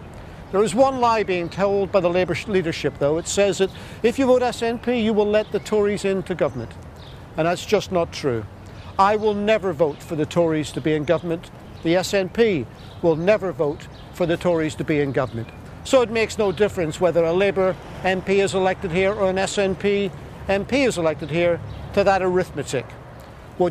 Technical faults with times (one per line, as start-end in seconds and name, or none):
11.55-11.76 processor overload crackle